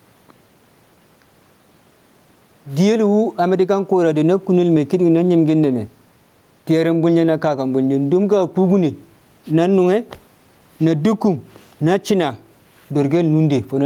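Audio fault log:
throughout, gain pumping: the gain swings around 10 dB, squashing loud and soft parts closer in level, and the room noise sits about 45 dB below the speech. Likely cause: input gain set too high, with a fast limiter squashing each peak.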